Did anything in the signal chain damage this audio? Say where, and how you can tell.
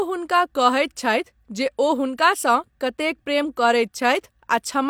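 No, nothing in the signal chain audibly damaged this speech recording. Listening closely, no stage from capture through to playback leaves a trace that points to a problem.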